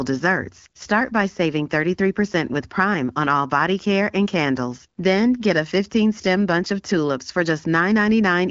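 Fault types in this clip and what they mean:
Nothing stood out on listening; the sound stays within the band of the AMR wideband (HD Voice) codec, with nothing above about 7.3 kHz.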